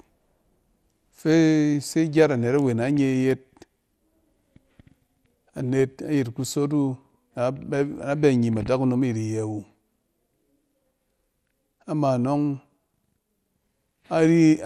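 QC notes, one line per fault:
Throughout: MP2 compression. The speech sounds dull and muffled, with a gurgling, granular roughness that comes and goes as the upper range flickers in and out. This likely comes from MPEG Layer II coding at a low rate, which fits about 80 kbps. The codec divides the signal into 32 sub-bands and shares out a bit budget that cannot cover them all. So upper bands are dropped and the remaining ones are coarsely quantised.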